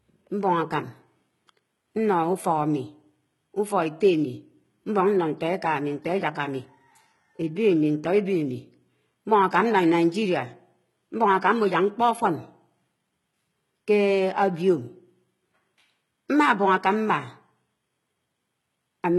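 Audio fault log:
throughout, likely HE-AAC compression: the speech keeps its brightness up to a hard ceiling near 11.8 kHz, yet s sounds turn gritty and lispy because the treble is rebuilt from copied lower bands. A plain low-pass would sound dull instead. The heavy damage fits roughly 16 kbps.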